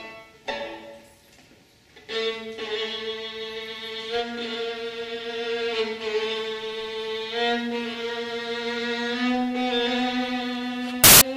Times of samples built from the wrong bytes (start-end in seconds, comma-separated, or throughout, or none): 11.04-11.21